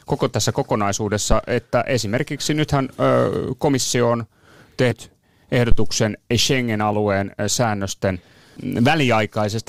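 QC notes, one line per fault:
1.32–1.42 s, phantom power thump: a deep thump decaying within about 22 ms, just before "että esimerkiksi nythän", as a supply step passes through the input's coupling capacitors.
4.90 s, compressed frames skipped: the speech jumps ahead about a tenth of a second, roughly five 23.2 ms frames missing or rejected by the decoder.
5.72–5.99 s, phantom power thump: a longer thump decaying over about 60 ms, caused by a supply being switched on a live input and its step reaching the preamp.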